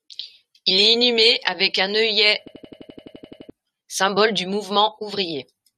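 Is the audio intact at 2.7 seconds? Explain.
No. At 2.7 s the audio is inside a system hang loop running from 2.48 to 3.50 s, just after "inhumé avec un œillet". The system stalled while the sound hardware kept replaying the same ring buffer, a slice of about 85 ms, which fits a 4096-sample buffer. That slice repeats 12 times at 11.7 Hz, giving a machine-gun stutter in place of about a second of speech, until the sound resumes at "symbole du".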